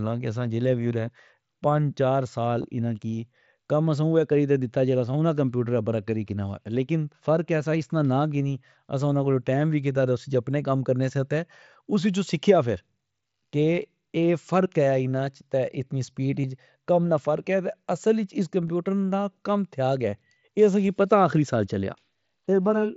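At 2.62 s, the sound briefly catches. This is concealed Bluetooth headset packet loss. Audio packets from the headset never arrived. The receiver filled the gap with a copy of the closest-matching recent waveform. Each gap is tiny: about 15 ms here, 7.5 ms at 15.26 s, and 15 ms again at 16.42 s and 18.67 s. So the single lost packet at 15.26 s is nearly hidden. The wideband mSBC link itself adds only light damage, a faint grainy noise on loud sounds.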